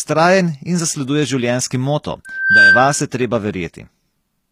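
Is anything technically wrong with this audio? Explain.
Yes, there are two faults.

Throughout, the speech carries plainly audible codec damage, with nothing above 15.5 kHz; the likely cause is HE-AAC compression, rebuilding treble from copied lower bands.

From 2.25 to 3.04 s, a loudspeaker feedback squeal at 1.6 kHz swells over roughly a third of a second to about 10 dB above the speech: a microphone-speaker loop with gain exceeding one.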